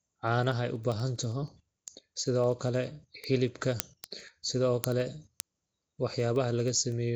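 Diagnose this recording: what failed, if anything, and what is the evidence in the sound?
Codec stage. The speech carries a rough, hissy halo and a smeared, underwater texture throughout, with nothing above 7.8 kHz. Weak bands are replaced by noise. This likely comes from Nellymoser compression, with the damage plainly audible and fitting a low bitrate around 32 kbps.

Converter stage, at the digital link. Word clock ticks run steadily from 0.12 s to 7.08 s, roughly every 0.07 s, about a hundred in all. The receiver runs on its own clock, some 300 ppm off the sender. At each slip one sample is dropped or repeated.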